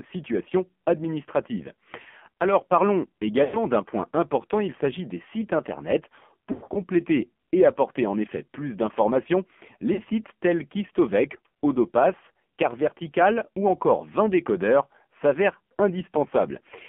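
Throughout the clip the speech sounds buzzy, thin and synthetic, confined to a telephone band of about 200 Hz to 3.4 kHz, with heavy codec damage. This is the AMR narrowband mobile codec. It rebuilds the voice from a vocal-tract model excited by a few pulses per subframe, and the strength of the damage points to a low AMR-NB mode around 5.9 kbps, where too few bits remain to capture natural texture.

From 3.44 to 3.57 s, just before "d'un point important il", the sound stretches into a smeared tone, fades, and then returns rough. These are lost AMR speech frames, about 100 ms in total. The decoder repeated the last good pitch and vocal-tract settings at falling gain. From 6.52 to 6.82 s, after "s'agit des sites internet", about 160 ms drops out in broken patches over 240 ms, with the longest gap about 100 ms, so the sound warbles in and out. At 9.94 to 10.01 s, between "en effet plus d'informations" and "sites tels", a 40 ms loss gives a brief dip and warble.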